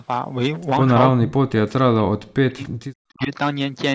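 From the start, the speech carries hard clipping. The signal is driven roughly 10 dB past what one stage can pass, so the loudest peaks are sliced flat. Only a small share of samples, around two percent, hit the ceiling. Those flat tops add harsh harmonics, reaching up to the 8 kHz limit of the call microphone processing. The result is a gritty crackle on peaks.

From 1.12 to 2.63 s, the speech collapses. It drops by something like 40 dB, close to silence. It does so again from 3.02 to 3.31 s. This is speech suppressed in double talk. The likely cause is an echo canceller that heard the far side talking at the same moment. Unable to separate the talker from the loudspeaker echo, it turned the microphone path down hard.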